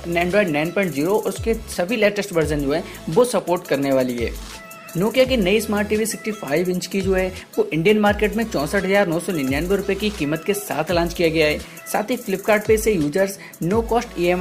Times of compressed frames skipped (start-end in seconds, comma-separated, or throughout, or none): none